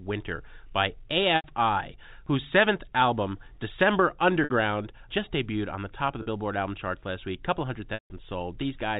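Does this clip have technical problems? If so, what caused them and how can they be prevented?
Yes. The speech, carried over G.711 telephone coding and band-limited to 4 kHz, has four gaps of packet loss with pitch repetition, at 1.36–1.44 s (80 ms), 4.44–4.50 s (60 ms, just before "just debuted on the"), 6.22–6.26 s (40 ms, right after "the top of the") and 7.94–8.10 s (160 ms). In each one the receiver loops the last pitch cycle, which gives a brief buzzy hold. The longest gap fades to silence before speech cross-fades back in. On a waveform these show as identical repeating cycles under a decaying envelope. On a spectrogram the harmonics turn into frozen horizontal lines that dim out. The gap lengths fit runs of 20 ms packets. Prevention: use a larger adaptive jitter buffer with forward error correction or redundancy on a less congested network path.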